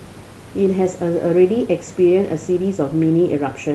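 Speech recording with no technical faults to report.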